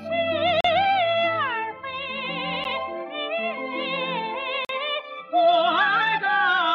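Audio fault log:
0.61–0.65 s, 2.64 s, 4.65–4.69 s: gap between stream segments. The sound stops dead three times, for about 38 ms, 11 ms and 43 ms. Each hole has hard edges and pure silence inside. The gaps fall about 2 s apart, which points to 2-second segments whose time stamps don't quite meet. The player pads each mismatch with silence. Nothing is lost; the audio simply resumes late, which is why it sounds like brief dropouts.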